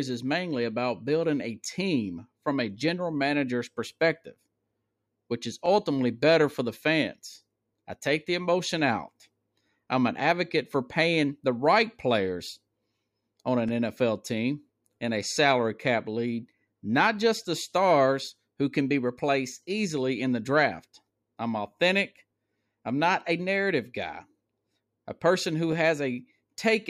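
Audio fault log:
1.65, 5.66, 9.67, 13.69, 17.70, 21.71 and 25.72 s: overlapping chunks. Each 4-second chunk starts 13 ms before the previous one ends, so that sliver plays twice, heard as a stutter every 4 seconds.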